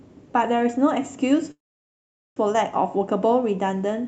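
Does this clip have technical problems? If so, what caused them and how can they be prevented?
Yes. A call audio freeze runs from 1.51 s to 2.39 s in this speech. The last sound is stretched into a brief fading buzz, then about 0.79 s of near-silence, before the audio resumes exactly where it stopped. Nothing is lost, but roughly 0.85 s of fill has been inserted, so everything after it arrives that much later. This is likely packets stalling in transit while the jitter buffer ran dry; the call codec's band limit near 8 kHz applies throughout. Prevention: give the call a more stable network path, with wired or less congested links and traffic prioritisation, and allow a somewhat deeper adaptive jitter buffer.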